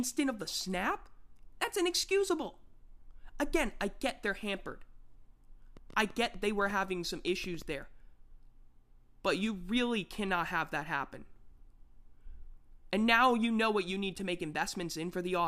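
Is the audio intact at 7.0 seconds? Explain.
No. A train of clicks runs from 5.77 to 7.63 s, about seven per second, irregularly spaced, likely from interference, showing as thin vertical spectrogram lines.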